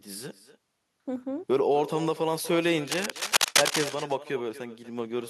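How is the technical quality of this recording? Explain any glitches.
The recording has two clear faults.

An echo with no canceller runs through the whole clip. The far end is playing the speech over a loudspeaker. Its microphone picks that up and sends it straight back. Nothing strips it out. The returning copy arrives roughly a fifth of a second after the original. It sits about 15 dB below the direct speech. Every phrase is trailed by a faint, thin double.

Cable scratch noise appears from 2.87 to 3.91 s. Dense, ragged bursts of scratching and rustling cover the speech for about a second. They are roughly as loud as the speech itself. The likely cause is a worn cable, connector or control being moved. Its contact resistance then jumps about rapidly. Those fluctuations turn directly into the uneven crackle heard over the sound.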